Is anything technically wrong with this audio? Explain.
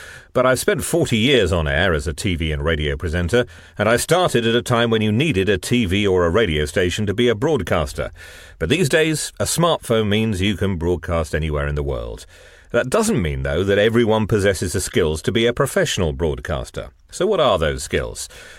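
No, nothing technically wrong here.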